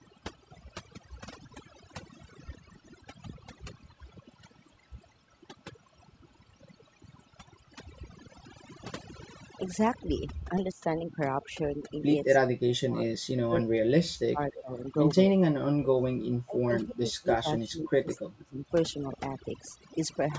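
From start to finish the speech carries overdone noise removal. The suppressor was set too aggressively, so individual frequency bands near its noise estimate are pulled far down or switched off, and the quieter components of the speech are removed along with the noise. The background drops and breaks up into twinkling, chirpy specks. The band above 8 kHz is empty, as expected from call microphone processing.

From 10.39 to 10.53 s and again from 10.73 to 10.83 s, the speech dips briefly, by up to about 20 dB and then about 10 dB. This is speech suppressed in double talk, likely caused by an echo canceller that could not separate the near talker from far-end echo and attenuated both. A long cut runs from 12.4 to 14.4 s and reaches a drop of about 40 dB. A short dip of about 15 dB follows from 14.58 to 14.71 s, and from 15.29 to 18.66 s the speech dips for around three seconds, dropping by as much as about 35 dB.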